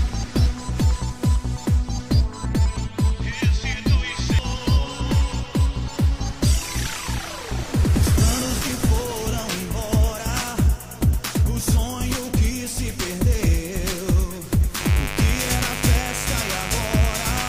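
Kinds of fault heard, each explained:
Mains buzz: from 14.80 s to the end at 17.49 s, a steady, raspy buzz sits under the sound at roughly 10 dB below it. Its 50 Hz fundamental and dense stack of harmonics reaching well into the kilohertz range come from sharp switching spikes, twice per mains cycle, leaking into the signal path through something like a dimmer, a rectifier or a poorly shielded cable.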